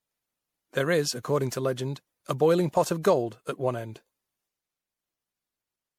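Across the whole speech clip there is generation loss, likely from around five successive MP3 encodes at a rate near 96 kbit/s. Swirling, hollow smearing and blurred attacks exceed what one pass at that bitrate produces, marking repeated requantisation rather than a single low-bitrate encode.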